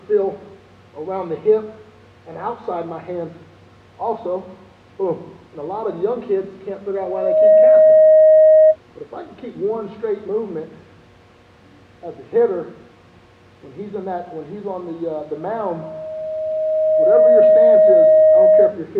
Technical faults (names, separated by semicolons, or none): loudspeaker feedback squeal